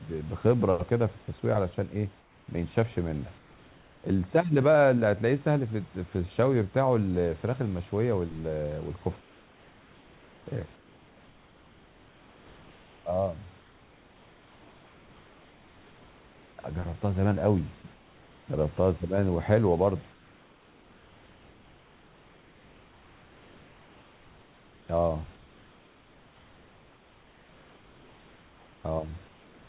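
Comfort noise in place of the background fills the pauses at 2.2–2.48, 3.38–4.04, 9.2–10.46, 10.76–13.06, 13.6–16.58, 17.94–18.48, 20.12–24.88 and 25.36–28.84 s. Each time, steady, featureless noise about 2 to 3 dB quieter replaces the room's background, likely because discontinuous transmission stopped sending during silence.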